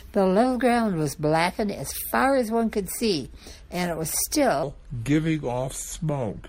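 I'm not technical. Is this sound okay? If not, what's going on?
No. From 4.63 s to the end, there's a section at the wrong speed. The speech plays at 0.76 times normal speed, so it sounds slower and about five semitones deeper. It's likely a playback or editing clock mismatch.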